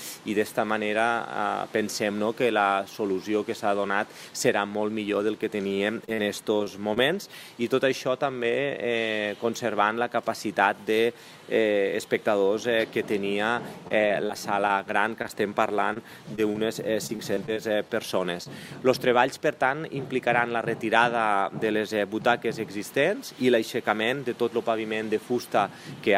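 From 5.69 to 6.98 s, then 13.88 to 15.31 s and 15.93 to 18.47 s, the audio turns choppy: repeated packet loss (robotic sound). Data arrives late or not at all, again and again, and each short hole (the longest about 45 ms, the longest in the later stretches nearer 25 ms) is patched by extending the preceding sound before the next gap arrives. Unlike a single dropout or a steady codec buzz, this comes as clustered stutters with fragments missing.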